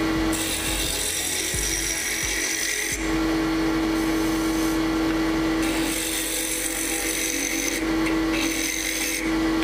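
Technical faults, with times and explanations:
No technical faults can be heard anywhere in the clip. There is nothing to list, with no time or explanation needed.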